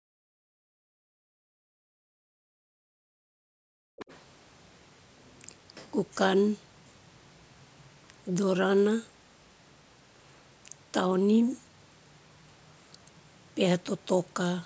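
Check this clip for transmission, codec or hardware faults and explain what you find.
Echo-canceller faults affect the first four seconds or so of this speech clip. The call's microphone processing, with nothing above 8 kHz, is normal and not a fault.

Background gated by the echo canceller occurs from 0 to 0.52 s and again from 1.58 to 2.74 s. The canceller turned the microphone down hard while the loudspeaker played. The room sound drops by about 40 dB, then comes back when the canceller releases.

Speech suppressed in double talk occurs from 0.8 to 1.3 s and from 3.02 to 3.97 s. The talker's voice dips sharply, by roughly 40 dB at worst. Both sides were likely talking at once, so the canceller pulled everything down.

Other side's voice leaking through occurs from 3.98 to 4.19 s. A faint second voice, around 20 dB below the talker, slips in briefly. The canceller likely left some of the loudspeaker sound in the microphone signal instead of removing it fully.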